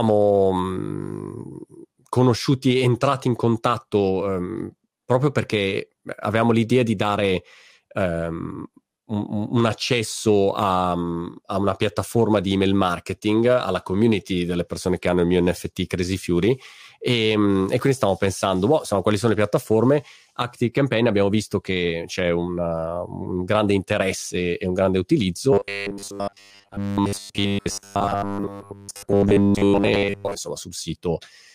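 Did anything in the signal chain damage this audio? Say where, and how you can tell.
Yes, there's robotic sound from repeated short buffers from 25.53 to 30.36 s. The speech goes stiff and metallic, with a steady buzz at 100 Hz sitting under it while the words stay only roughly trackable. That's likely a driver or buffer underrun: audio isn't arriving in time, so the last 10 ms chunk gets looped over and over for most of that stretch. The repeat period sets the buzz at 100 Hz and drops the real audio.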